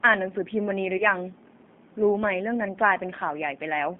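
From start to end the speech carries the sound of the G.729 codec: the band runs only from about 200 Hz to 3.6 kHz, and the voice has a plainly audible rough, slightly synthetic texture. The encoder rebuilds each 10 ms frame from a vocal tract filter, a pitch predictor and a handful of pulses, which fits an 8 kbit/s G.729A stream. A simple band-limited telephone line would sound dull but still natural. This sounds grainy as well as narrow.

From 0.97 to 1.06 s comes VoIP packet loss concealed by the speech codec. About 30 ms of audio went missing, which fits three lost 10 ms frames. The decoder kept extending its last pitch and filter settings at falling gain, so the sound smears into a brief buzzy tone or coloured noise that fades, instead of cutting to silence. A plain dropout would leave a clean gap. Here the voice stays weak or distorted for tens of milliseconds or more past the loss while the decoder's memory recovers.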